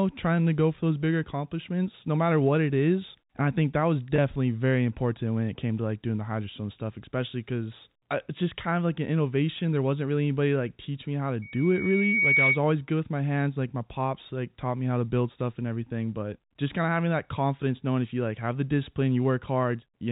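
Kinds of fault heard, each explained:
Packet loss with pitch repetition: At 4.16 s, between "I think that was" and "very important when it", about 20 ms of audio went missing and was bridged by repeating the last pitch cycle, so the sound briefly holds with a buzzy sameness instead of dropping to silence.
Loudspeaker feedback squeal: From 11.42 to 12.61 s, after "teach me how to", a single 2.2 kHz tone swells over roughly a second to about 5 dB above the speech. The gradual self-feeding rise sets it apart from a steady interfering tone.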